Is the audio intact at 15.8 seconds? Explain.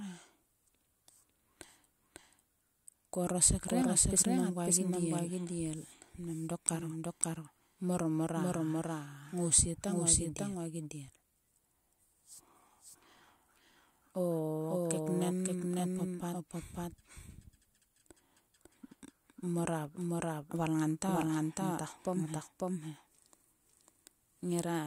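No. At 15.8 s, as throughout, a doubled audio track is heard: a second, equally loud full-band copy trails by about half a second, likely from a slower capture path. Spectrograms show every pattern repeated half a second later; waveforms show duplicated envelopes.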